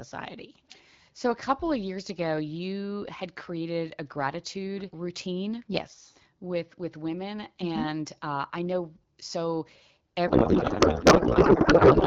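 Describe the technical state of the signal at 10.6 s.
At 10.6 s there is a codec payload misread, running from 10.27 s to the end of the clip. The speech gives way to garbled noise and warble that barely tracks it. This points to octet-aligned AMR frames being unpacked as bandwidth-efficient, with fields read from the wrong positions.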